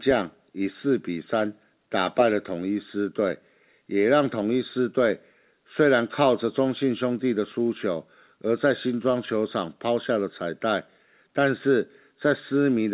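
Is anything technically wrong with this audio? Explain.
No, nothing technically wrong can be heard here.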